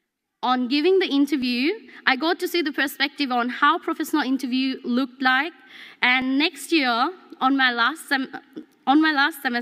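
Regular clicks recur every 2.41 s from 1.42 s to 8.63 s, about four in all: likely clock drift buffer slips, each dropping or repeating a few dozen samples.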